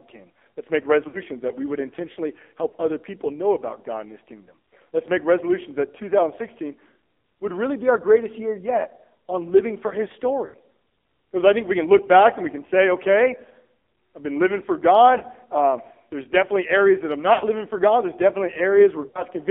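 Throughout, heavy AMR narrowband mobile codec damage confines the speech to 250 Hz to 3.5 kHz, leaving the spectrogram blank above. The sound is buzzy and synthetic, fitting a low 5.9 kbps mode.

Lost AMR speech frames occur at 1.08, 2.68, 10.46, 15.18, 17.34 and 19.08 s. The decoder replays stale settings at falling gain, causing 20 to 80 ms warbling dips that appear as smeared, fading bands.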